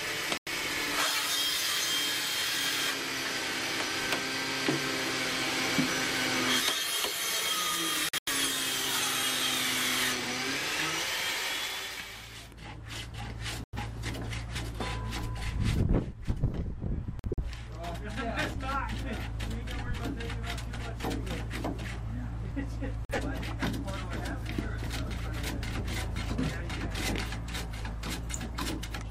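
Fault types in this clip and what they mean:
Corrupt frame muted: Damaged compressed frames that the decoder couldn't accept, so the player swapped in silence and kept the timeline intact. You hear that as sudden dropouts that cut straight to nothing: at 0.38 s and 13.64 s for about 0.15 s, at 8.09 s and 17.19 s for closer to 0.23 s, and at 23.05 s for about 0.15 s. The lengths fit two to four frames going missing in a row.
Audio missing between chunks: Tiny skips where the sound jumps forward with no gap of silence, as if a sliver about 20 ms long had been snipped out and the ends butted together. They land at 6.6, 14.56, 18.54, 22.51 and 26.49 s, spaced at multiples of 4 s. That regular spacing points to the likely cause: the recording or processing chain working in 4-second blocks and dropping a bit each time it hands over to the next one.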